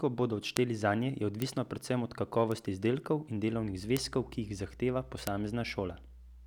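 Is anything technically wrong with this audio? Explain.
Yes, there are two separate problems in this speech clip.

The first is a string of bit error spikes, at 0.57, 1.42, 2.52, 3.97 and 5.27 s. Each one is a single flipped bit in the digital data, which throws one sample, or in the first case a short run of a few, off by a power of two before it snaps back. You hear a hard, broadband tick that has nothing to do with the speech. The ones at 0.57, 3.97 and 5.27 s peak around -7 dBFS, 1.42 s around -13 dBFS, and 2.52 s around -19 dBFS.

The second is mains hum, which comes in at 3.54 s and runs to the end. It's a steady 60 Hz drone with some low harmonics, sitting roughly 20 dB under the speech. That's the sound of power-line energy getting into the signal, typically through a ground loop or a transformer close to the cabling.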